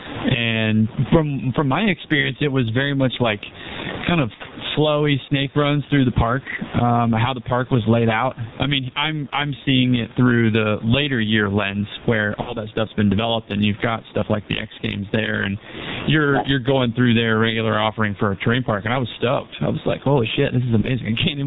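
From start to end, the speech is heavily damaged by the G.723.1 codec. It is muffled and hoarse. Nothing above 4 kHz survives, and consonants blur together. The slow model updates and thick coding fit its low 6.3 kbit/s mode.

Gain pumping also runs throughout. The level swings by around 20 dB. Loud and quiet parts sit close together, so the speech sounds squashed. The likely cause is gain set far too high, with a fast limiter clamping every peak.

VoIP packet loss, concealed by the speech codec, breaks in four times. At 2.21 to 2.32 s, the decoder covers about 30 ms of missing audio. It stretches the last sound into a fading buzzy tone or coloured noise, and the voice stays weak for a moment afterwards. At 4.34 to 4.42 s and 12.41 to 12.57 s, about 60 ms is missing each time. These gaps give longer stretched, fading fills. At 20.81 to 20.87 s, another 30 ms gap brings a short fading fill.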